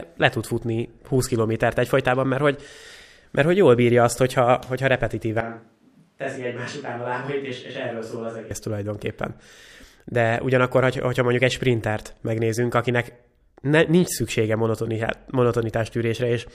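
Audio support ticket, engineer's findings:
Speech abruptly roomy, hollow, bass-light at 5.40–8.51 s, after "bírja azt hogyha hogyha"; about 10 dB quieter, noisier. Likely switch to a distant microphone.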